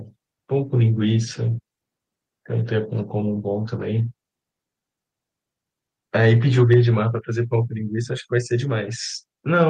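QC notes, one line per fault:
6.59–6.80 s, microphone overload: the loudest peaks take on a harsh, crackling edge as their tops are flattened, a few percent of samples pushed about 2 dB past full scale. The likely cause is microphone input volume set high enough to drive the converter into its limit.
6.74 s, microphone volume stepped down: the voice and the background drop together by about 3 dB in one abrupt step, landing right inside the distorted peak. The likely cause is the call software sensing clipping and cutting the device's input volume at once.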